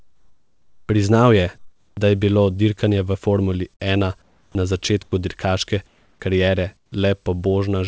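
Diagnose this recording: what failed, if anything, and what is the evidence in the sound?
Comfort noise in place of the background, at 0.00–0.89 s, 1.58–1.97 s (ending just before "je bilo"), 4.22–4.55 s, 5.87–6.20 s and 6.77–6.92 s. In the pauses the room tone turns into a smooth, featureless hiss, shifting by about +2 to −6 dB. This is likely call-processing discontinuous transmission, with the receiver synthesising shaped noise while the sender is silent.

Sound dropped by the voice detector, at 5.03–5.12 s, right after "ena na". About 40 ms of sound vanishes into that same steady noise. The detector likely judged the sound to be background and cut transmission before the sound had finished.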